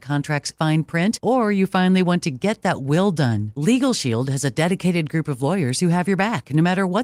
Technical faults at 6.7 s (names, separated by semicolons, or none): none